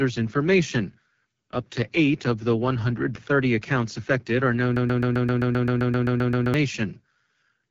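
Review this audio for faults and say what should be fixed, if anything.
The whole clip has been through the AMR wideband (HD Voice) codec, and you can hear it. The speech sounds rough and raspy, the typical grit of the codec's lower modes, which fits a rate around 8.85 kbit/s. At that rate the pulse-driven vocal tract model can't track the voice cleanly, and nothing comes through above about 7.3 kHz, so the top end is missing. To prevent it, carry the call at 12.65 kbit/s or higher, or use a wider codec.

There's also a broken-record loop from 4.76 to 6.54 s, right after "accounts affected are known". A 130 ms piece plays 14 times back to back, and whatever should have filled those 1.8 seconds is gone. The likely cause is a stall in the player, encoder or stream, which kept resending the last fragment it held. To prevent it, add stall detection that outputs silence or conceals the gap instead of replaying the stale buffer.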